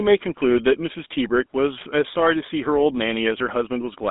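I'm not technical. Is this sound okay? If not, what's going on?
No. The speech has passed through the GSM full-rate codec, an old mobile-phone format. It keeps only about 200 Hz to 3.7 kHz, so voices sound buzzy and gravelly throughout.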